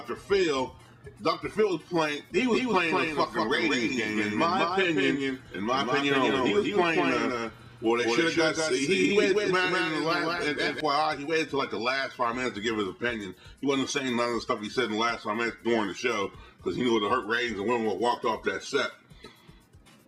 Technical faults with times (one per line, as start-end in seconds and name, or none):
2.52-10.80 doubled audio track